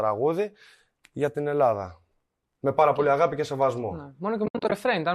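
From 4.46 to 4.72 s the speech breaks up into several short silent gaps. This is AAC frame loss with muting: about 160 ms of audio is lost in pieces over roughly a quarter second, with the longest gap around 70 ms. That pattern fits about sixteen missing 10 ms frames, likely from the low-delay AAC coding. Each gap fades out and back in smoothly. Concealment would fill the gaps with repeated or smeared sound, but here they are truly empty.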